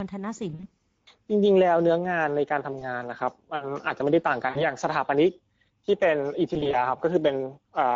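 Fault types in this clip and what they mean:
Speex codec: The whole speech clip carries plainly audible damage from this CELP coder. At 16.8 kbps the excitation is coarsely modelled, so voices sound hoarse and noisy all the way through. Unlike dropout damage, it is steady rather than tied to moments.
VoIP packet loss concealed by the speech codec: Around 0.5 to 0.7 s, at 2.8 s, near 4.5 s and around 6.5 to 6.9 s, the decoder papers over missing audio by stretching the last sound into a fading buzz or coloured noise. This leaves brief smeared, weakened patches rather than clean silent gaps.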